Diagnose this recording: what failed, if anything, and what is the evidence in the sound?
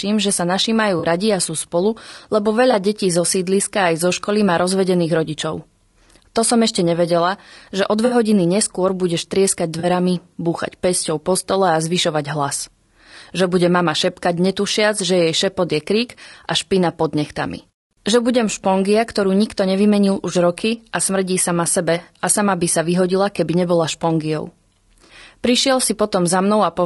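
Codec stage. The speech sounds rough and grainy throughout, with noise between harmonics. This is likely low-delay AAC compression, consistent with about 32 kbps.

Network stage: AAC frame loss with concealment. There are smeared, noisy patches at 0.99, 2.71, 8.05, 9.79 and 25.05 s, lasting 20 to 60 ms. The decoder rebuilt them from earlier spectrum.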